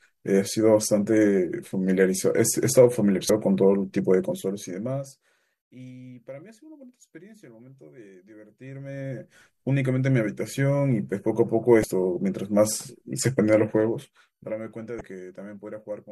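A brief glitch at 3.27 to 3.30 s marks damaged data in a compressed stream: corrupted frames make the decoder lose sync and jump ahead to the next header. The same blip recurs at 11.81 to 11.84 s. From 13.51 to 14.66 s a fine ticking rides on the speech as the level falls by roughly 20 dB. This zipper noise comes from 1 dB steps applied about twenty times a second without smoothing. A final glitch of stream damage lands at 14.98 to 15.01 s.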